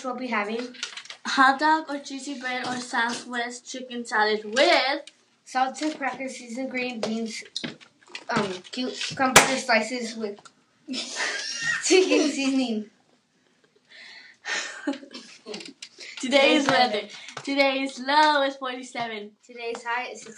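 No technical faults are audible.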